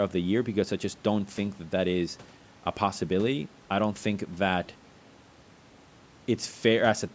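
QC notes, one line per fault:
No faults are present: the speech shows the normal shaping of call microphone processing, with content extending up to 8 kHz and the lowest bass removed by its high-pass filter as intended.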